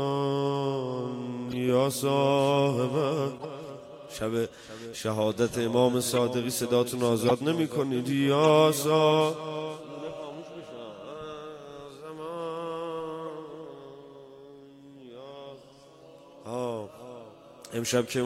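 Corrupt frames decoded at 1.49, 3.35, 6.14, 7.25, 8.44 and 13.25 s. Damaged compressed frames play anyway, misplacing energy. Each gives a brief chirp or noise blip.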